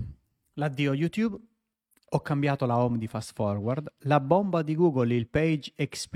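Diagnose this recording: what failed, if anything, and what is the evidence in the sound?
Nothing failed; no fault is audible anywhere.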